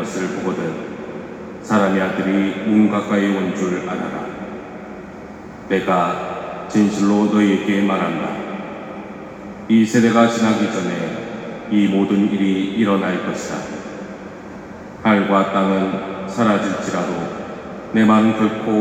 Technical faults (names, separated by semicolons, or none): none